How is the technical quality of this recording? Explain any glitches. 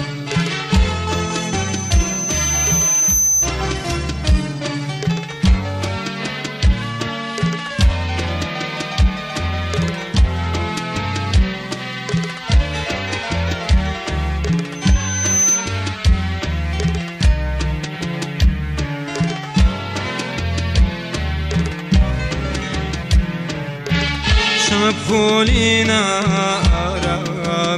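The recording is marred by loudspeaker feedback squeal, heard twice: from 1.10 to 3.54 s and from 14.75 to 15.80 s. A microphone is picking up its own loudspeaker, and at 6.1 kHz the loop gain passes unity, so that tone feeds on itself. It swells over about two seconds the first time and under a second the second time, ending a few decibels louder than the sound around it. On a spectrogram it shows as a bright horizontal line at 6.1 kHz that brightens as it builds.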